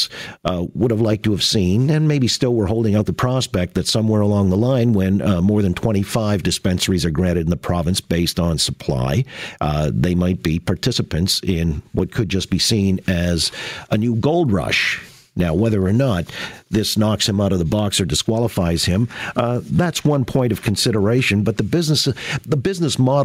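Gain pumping runs through the whole speech clip: the level is pulled down the moment the talker gets loud, a swing of around 15 dB. The likely cause is input gain set far too high, with a fast limiter clamping each loud syllable. Unlike a noise gate, which simply cuts quiet passages off, this leaves the speech itself sounding squashed and flat in level.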